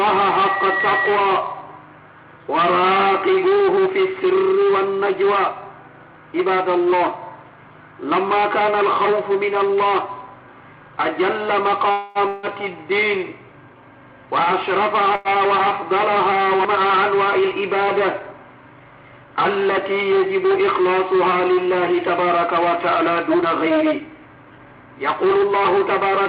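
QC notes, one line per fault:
11.91–12.18 s, call audio freeze: a 238 ms gap is filled with the last sound continued as a fading buzz or hiss, then playback resumes with nothing lost; likely late packets emptying the jitter buffer.
12.28–12.46 s, long network dropout: about 151 ms of fading buzz or hiss fills the gap, and 160 ms of audio never returns; likely a network dropout.
15.15–15.28 s, short stall from a late packet: the last sound is stretched for 95 ms until the packet arrives, then playback continues with nothing missing.
17.28–18.34 s and 23.32–26.18 s, jitter buffer speed-up: playback runs at 106% and 108% speed at unchanged pitch and sounds hurried. Short pitch-period pieces totalling about 70 ms and about 200 ms are cut to reduce buffered delay.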